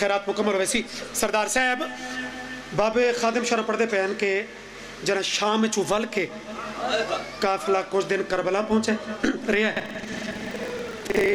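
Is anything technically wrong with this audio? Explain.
Yes. Buffer tearing starts at 9.75 s and lasts to the end. The program filling the ring buffer and the hardware reading it have fallen out of step, so their positions cross inside every period. Most of each buffer then plays audio about a tenth of a second old, butted hard against the current audio on both sides. Those joins repeat at 21.5 Hz, which fits a 2048-sample buffer. The result is a steady robotic buzz laid over the sound.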